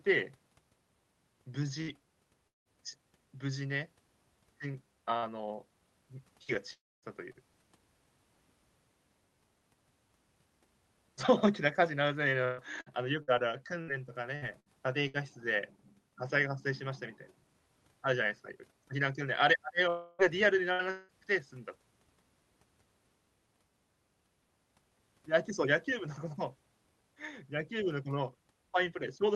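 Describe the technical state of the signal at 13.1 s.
Choppy, robotic speech with pieces missing, from repeated packet loss between 12.45 and 15.17 s. Each dropout is patched by extending the previous sound, and the longest gap is 119 ms.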